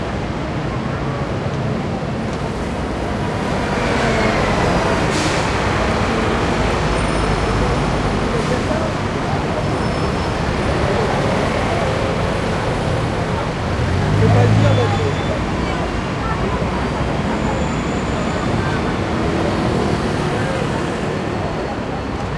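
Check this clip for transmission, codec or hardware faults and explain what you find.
Nothing stood out on listening to this audio.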